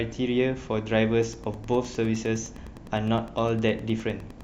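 From 1.18 s to the end, Wi-Fi interference: a nearby radio's beacons, rectified by the audio circuit, add a faint tick every 102.4 ms, well beneath the speech.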